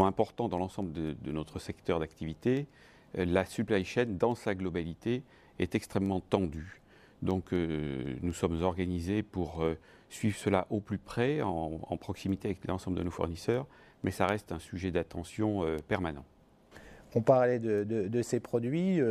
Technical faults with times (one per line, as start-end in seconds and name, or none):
0.33-19.03 word clock ticks